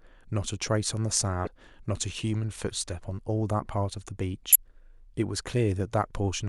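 At 1.44 to 1.47 s and again at 4.52 to 4.56 s, the speech breaks up briefly. Both are damaged data in a compressed stream. Corrupted bytes make the decoder misread frames and lose sync until it finds the next frame header.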